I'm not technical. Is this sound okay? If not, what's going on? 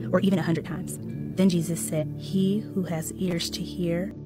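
No. From the start to 1.56 s the sound runs at nearly twice normal pace, about 1.92 times, yet its pitch stays put. That is a time-stretched section, likely from software squeezing the audio to fit a length by dropping small pieces. That is why it sounds rushed rather than high and squeaky.

At 1.98–2.04 s and again at 4.11–4.17 s there is a brief glitch. This is damaged data in a compressed stream. Part of the file was corrupted, so the player briefly misread it before finding its place again.

From 3.19 to 3.45 s there is processor overload crackle. The computer fell behind and skipped around ten very short chunks of audio, each well under a millisecond. That leaves a quarter-second run of gritty tearing, unlike the single glitches above.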